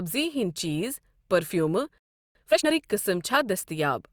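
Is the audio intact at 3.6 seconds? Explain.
Yes, at 3.6 seconds the speech plays through intact, with no audible fault at that moment.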